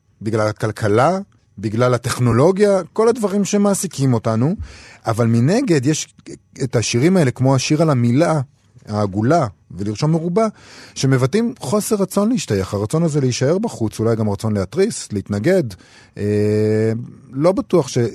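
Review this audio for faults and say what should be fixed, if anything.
At 2.32 s there is an AAC frame loss with concealment: a brief smeared, noisy patch of about 10 ms, which fits one lost frame that the decoder filled from the previous spectrum. Unlike a buffer underrun, it leaves no hard gap or click. Adding forward error correction or redundancy on the transport would prevent it.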